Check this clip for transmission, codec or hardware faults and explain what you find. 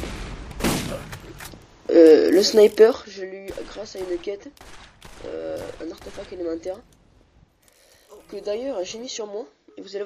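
One fault is present: zipper noise from 2.66 to 3.35 s. The level falls by about 15 dB in discrete increments, roughly a hundred a second, with no smoothing between them. Each jump puts a tiny click in the waveform, so the fade carries a fine ticking, zipping texture.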